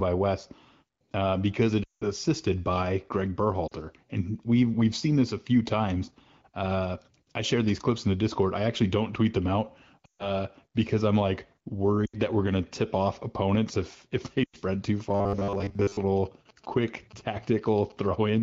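Speech carried over AMR wideband (HD Voice) coding breaks up five times with lost AMR speech frames: at 1.83 s for 0.18 s just after "uh because it", at 3.67 s for 0.04 s just before "and we've we've seen", at 10.05 s for 0.14 s, at 12.06 s for 0.08 s between "because I'm like" and "that we're gonna tip", and at 14.44 s for 0.10 s. The sound blurs and sinks toward near silence, then returns weak or rough for a moment. Radio errors made those frames fail their checksum, so the decoder rebuilt them from the last good pitch and vocal tract settings at falling gain, and in wideband this drops to near silence within about two frames. From 15.09 to 15.98 s the audio turns into robotic sound from repeated short buffers: a rigid, metallic 100 Hz buzz that only loosely follows the speech. Most of that stretch is repetition rather than new audio. The likely cause is new audio arriving too seldom, so the software kept replaying the last fragment while real audio was skipped, and the buzz rate fits a buffer about 10 ms long. 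From 16.17 to 18.38 s a galloping dit-dit-dit of short 217 Hz buzzes sits about 25 dB below the speech. These are GSM signalling bursts from a nearby 2G phone exchanging short radio bursts with its network, which the audio circuit rectifies into sound.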